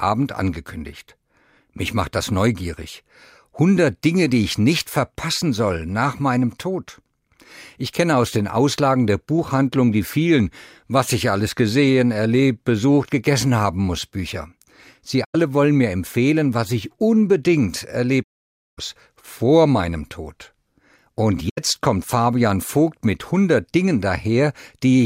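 At 15.24–15.35 s, just before "wollen mir empfehlen was", at 18.23–18.79 s between "empfehlen was ich unbedingt" and "vor meinem", and at 21.49–21.58 s, AAC frame loss with muting zeroes the decoded spectrum. Soft-faded gaps result, showing as blank spectrogram columns and tapered waveform silence.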